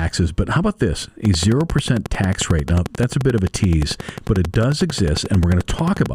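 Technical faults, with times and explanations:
1.25 to 6.07 s, train of clicks: right after "but how about this", a steady ticking starts at about 11.2 clicks per second and runs nearly to the end, around fifty near-identical pulses standing roughly 10 dB above the speech and clearly audible in the pauses. The even spacing and matching shape set it apart from random crackle or isolated pops; the likely cause is interference from nearby equipment or a faulty connection or power supply injecting a repeating pulse.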